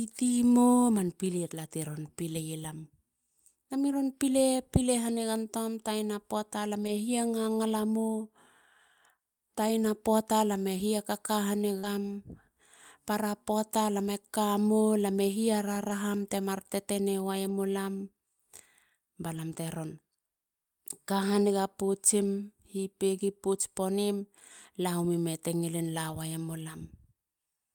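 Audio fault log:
6.83–6.89, 11.83–11.85, 15.89–15.91, 17.45–17.51, 19.33–19.39, 22.23–22.25 and 26.09–26.11 s: lost packet rebuilt from error correction. Each spot lasts 20 or 40 ms, which fits one or two lost packets. There is no gap in the speech. The decoder played a low-bitrate copy of each lost piece, carried in the packet that followed it. Those stretches sound rougher and noisier. The copy lacks fine detail, so it can't match the surrounding audio.
11.79–11.85 s: short concealed packet loss. About 40 ms of speech arrived too late. The receiver filled 37 ms of it by extending the preceding sound, then blended back into real audio. The last 20 ms overlaps a rebuilt-packet spot. The result is a brief smear or wobble rather than silence. A short consonant there can disappear, because the filler only continues what came before it.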